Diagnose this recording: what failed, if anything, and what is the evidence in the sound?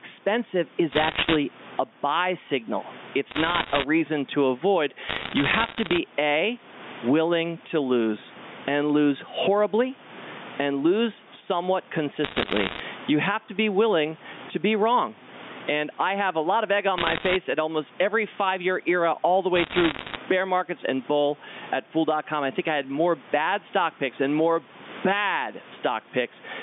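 Gain pumping runs through the whole recording. The gain swings by around 20 dB as it clamps down on loud sounds, which squashes the dynamics. The likely cause is input gain set far too high, with a fast limiter or compressor clamping it down.

Bit errors on a digital phone line appear as bursts of sharp ticks and crackle at 0.92–1.36, 3.3–3.84, 5.09–5.98, 12.24–12.8, 16.98–17.36 and 19.56–20.16 s. In the network stage, a percent or two of the bits on the G.711 line were flipped. Each error corrupts one sample, and a flipped sign or high bit produces a sharp tick. The 150 Hz to 3.6 kHz telephone band itself sounds intact.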